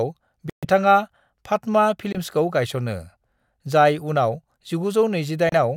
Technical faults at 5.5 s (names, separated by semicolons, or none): Bluetooth stall